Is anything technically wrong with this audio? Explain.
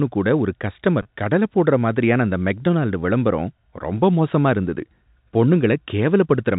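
Yes. Packet loss with pitch repetition occurs at 1.02 to 1.05 s. About 30 ms of the signal goes missing, which fits a single lost packet. The receiver fills the hole by repeating the last pitch period of the speech. The result is a brief held, slightly buzzy tone where the voice should move on. Then normal speech resumes. The telephone-band sound of the G.711 coding stays audible throughout.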